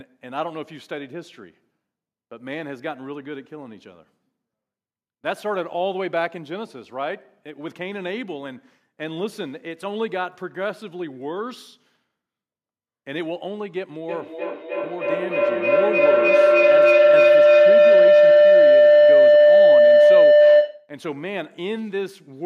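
From 14.09 s to 20.97 s the speech is overtaken by feedback howl. Sound from a loudspeaker re-enters a microphone with net gain each trip, so it builds to a tone near 500 Hz, pulsing roughly every 300 ms and peaking about 14 dB above the speech.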